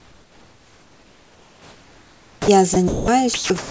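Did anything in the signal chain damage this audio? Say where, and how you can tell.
Yes. From the start to 2.48 s the background is comfort noise, likely from discontinuous transmission in call processing. Instead of a real room, a steady featureless hiss sits about 7 dB lower. Unlike a noise gate, it never drops to true silence, and it lacks the texture of the real room noise.

The onset clipped by the voice detector falls at 2.38 to 2.48 s, where 100 ms of speech is replaced by that synthetic noise. The word starts abruptly, likely because the detector reacted late. A packet loss would hit mid-word rather than only the beginning of the sound.

Sound dropped by the voice detector appears at 2.74 to 2.76 s, 2.88 to 3.08 s, 3.34 to 3.50 s and from 3.58 s to the end. Speech gives way to steady comfort noise for 20 to 200 ms, likely because quiet speech was taken for background. Concealment glitches would sound buzzy or repeated, not smooth noise.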